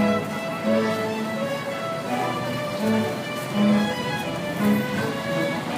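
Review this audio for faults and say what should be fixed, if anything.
Nothing needs fixing, as the audio shows no technical faults that a careful listen can pick out.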